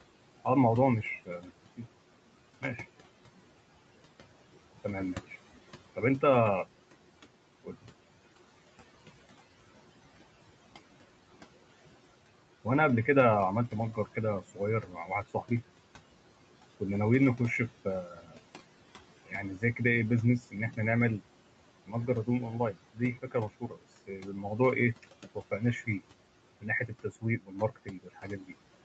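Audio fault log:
Throughout: noise suppressor artifacts. The background is pulled down by about 17 dB between phrases and rises under speech.
0.45–2.64, 4.84–6.23, 7.64–7.86, 13.72–15.51, 16.78–20.78, 21.86–28.53 s: speech cut by the noise suppressor. The suppressor mistook soft speech for noise and dropped it by up to about 18 dB. The cut parts sound swallowed or faint, worst in the last stretch with about two seconds affected.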